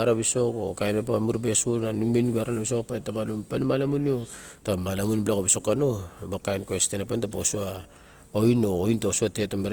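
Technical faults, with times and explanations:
Throughout: Opus compression. The speech has a rough, grainy quality, with tonal parts of the voice smeared into a noisy, fizzy texture. There are no obvious swirly holes, though, and the top end still reaches about 20.2 kHz. That points to Opus likely running in its CELT music mode at a low rate, which fits something around 24 kbps. The codec keeps each band's energy but fills the detail with noise or folded copies of lower bands.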